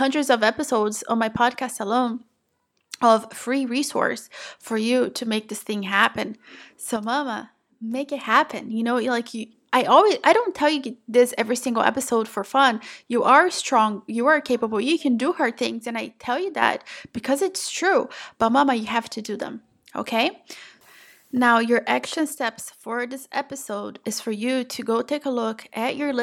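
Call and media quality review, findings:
Likely one stereo channel dropping out. 6.96–8.24 s, 15.67–16.62 s, 22.35–23.95 s: after the mono sum, the speech falls about 6 dB, then returns abruptly.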